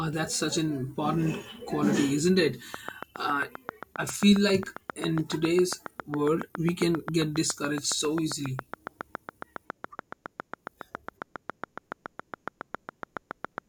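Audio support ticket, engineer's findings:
Train of clicks, 2.74–13.59 s, from "quality isn't it": regular 7.3/s ticks, about ten dB above speech, likely nearby-equipment interference. Thin vertical spectrogram lines; evenly spaced waveform spikes, pauses too.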